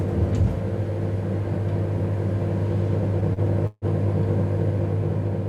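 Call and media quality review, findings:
Repeated stalls (stutter), 3.01–3.85 s. Four hold-ups; playback drags and catches. Jitter buffer ran dry each time packets arrived late or slow. Receiver stretched the last sound to bridge them, fading it through the longest, about 151 ms. Roughly 204 ms filled, nothing lost. Concealment covers about a quarter of the span.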